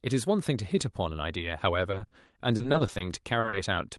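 From 1.91 to 3.02 s, and again from 3.40 to 3.58 s, repeated packet loss breaks the speech into choppy, robotic fragments. Missing chunks, the longest about 40 ms, are patched by stretching earlier sound, which shows as smeared, repeated spectrogram frames.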